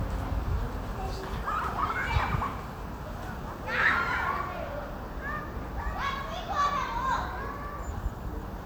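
No technical faults can be heard anywhere in this audio.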